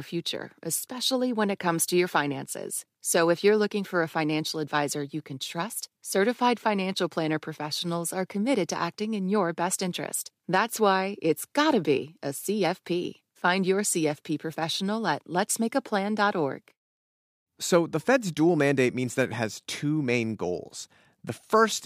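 No technical faults can be heard anywhere in the speech recording. There is nothing here to place in time or trace back to a cause.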